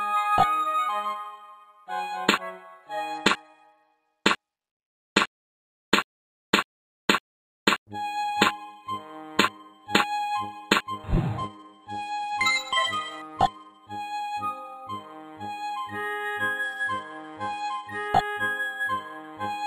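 Bluetooth SBC bit pool drop occurs three times: 3.14 to 5.69 s, 11.38 to 13.77 s, and 16.63 to 18.08 s. Each time the link appears congested and the encoder falls back to fewer bits per frame, which fits a bit pool cut from 31 to 15, near 105 kbps. The upper sub-bands lose their allocation and the rest are quantised coarsely, so the treble dulls and a gritty noise rises until the rate recovers.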